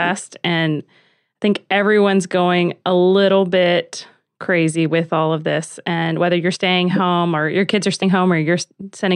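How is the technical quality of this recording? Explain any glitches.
The recording has two audible glitches, both compressed frames skipped. At 6.55 to 6.57 s, between "this and whether you're" and "home or your kids", and again at 8.01 s after "or your kids are", the decoder drops whole 23.2 ms frames: about two (roughly 50 ms of audio lost), then about three (roughly 70 ms). Each time the audio jumps ahead by the length of the frames left out.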